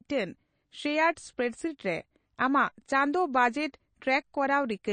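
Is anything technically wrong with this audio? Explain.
Yes. Throughout the speech there is plainly audible damage, with nothing above 9 kHz and a watery, swirling texture. This is likely MP3 compression at a low bitrate, around 32 kbps: the encoder cuts the treble and drops weak frequency components that flicker between frames.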